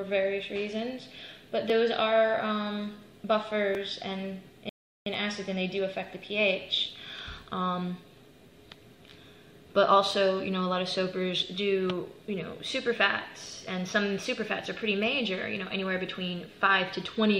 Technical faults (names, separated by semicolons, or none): rebuffering stall